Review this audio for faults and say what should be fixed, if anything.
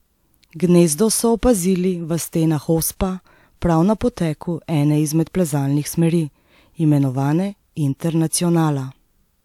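Nothing in the speech recording calls for a fix, as the signal holds steady throughout with no audible technical faults.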